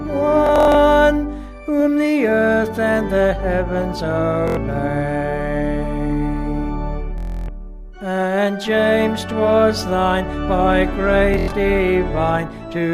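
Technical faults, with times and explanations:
0.47–0.75 s, 4.48–4.57 s, 7.18–7.48 s, 11.34–11.53 s: Bluetooth stutter. Late or missing packets make the receiver replay its last short slice, giving buzzing repeats. About 0.14, 0.09, 0.30 and 0.14 s are skipped. The spectrogram shows repeating vertical stripes, the waveform a copied block pattern, then a jump where playback rejoins.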